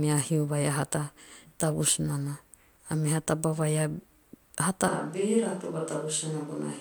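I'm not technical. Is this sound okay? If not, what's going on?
No. At 4.88 s the speech suddenly turns hollow, roomy and thinner, a bit quieter, with more background noise, until the end. That points to a switch to a distant microphone, likely a farther one replacing the close one. Unlike a simple volume drop, the room's echo jumps in instantly.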